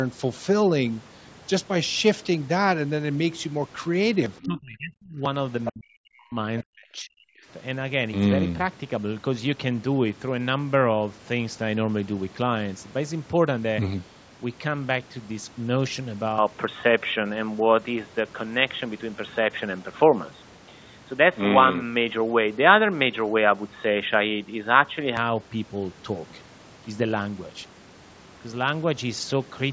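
Between 4.37 and 4.46 s, and again from 5.65 to 5.72 s, brief scraps of the other side's voice leak through, about 15 dB and then about 10 dB below the talker, most likely a loudspeaker echo the canceller left behind. On a spectrogram they show as faint, separate harmonic traces.

Around and after the leaks, the speech is suppressed in double talk: from 4.43 to 5.22 s, 5.72 to 6.4 s and 6.62 to 7.46 s, the talker dips by as much as about 35 to 40 dB. This is likely the canceller ducking everything while both sides overlap. The waveform shows sudden collapsed troughs, and the spectrogram shows blank gaps.

From 16.38 to 25.17 s the input has switched to a poorer device, likely a different microphone or a headset's call profile. With no gap at the switch, the sound turns dull and boxy, the level shifts by about 5 dB, and new noise sits about 45 dB down. The spectrogram top falls from 8 kHz to a narrower band.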